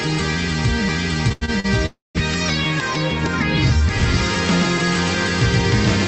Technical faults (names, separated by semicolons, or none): repeated stalls (stutter); call audio freeze